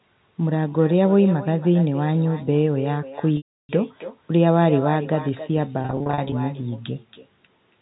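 From the start and right through, there's echo with no canceller: the far end's loudspeaker is feeding its mic, so every phrase comes back about 15 dB down, roughly a third of a second later, as a thinner shadow trailing the talker.

Then there's packet loss with pitch repetition, twice. From 3.37 to 3.69 s about 320 ms goes missing in one block, so the repeated pitch period buzzes briefly, fades to silence and cross-fades back. From 5.82 to 6.32 s about 250 ms is lost in short scattered gaps, none longer than 40 ms, giving a string of brief held, buzzy blips.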